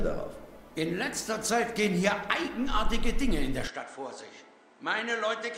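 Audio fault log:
3.67 to 5.57 s: input likely switched to a poorer device. The sound abruptly turns duller and roughly 10 dB quieter, with nothing above 8.9 kHz and a faint new noise floor far below the signal, as from a narrower-band microphone taking over without any gap.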